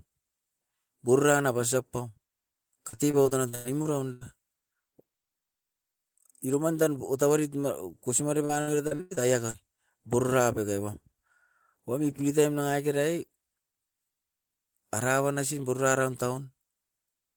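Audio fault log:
2.89–4.23 s, repeated packet loss (robotic sound): audio packets kept dropping, each hole (up to 99 ms) filled by extending prior sound, leaving 28% choppy and robotic.
8.45–9.56 s, repeated packet loss (robotic sound): another burst of lost packets, gaps up to 100 ms patched with repeated sound, making 32% of this stretch choppy and broken.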